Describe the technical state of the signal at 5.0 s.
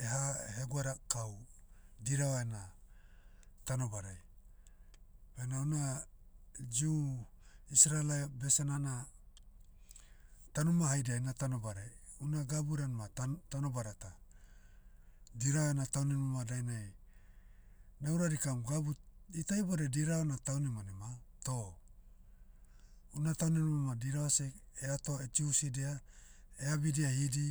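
At 5.0 s the speech signal is intact, with no audible fault at that point.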